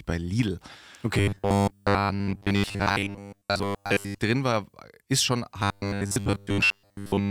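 A speech clip that twice turns into a rigid, metallic buzz pinned at about 100 Hz, still loosely tracing the words: from 1.15 to 4.19 s, ending just before "drin war ist schon", and again from 5.60 to 7.30 s, right after that phrase. This robotic sound from repeated short buffers likely comes from audio arriving too seldom, so a 10 ms slice was looped to fill most of each stretch while the real signal was skipped.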